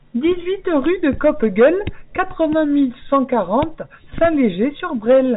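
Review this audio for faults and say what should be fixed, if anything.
Nothing stood out on listening to this speech, so there is nothing here that needs fixing.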